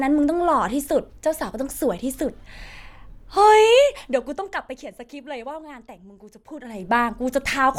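No faults to report on this speech recording; nothing here needs fixing.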